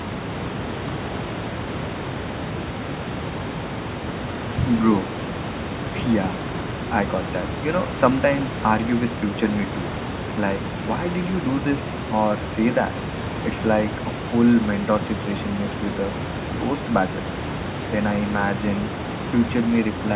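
Nothing stood out on listening to this speech recording; the room noise sits about 9 dB below the speech and the call path's band limit leaves nothing above 4 kHz.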